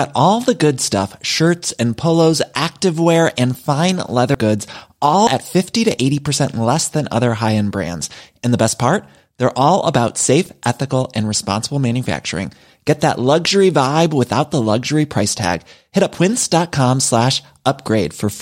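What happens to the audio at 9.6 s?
Nothing goes wrong at 9.6 s; the audio is intact at that moment, without any click, dropout or change in level or tone.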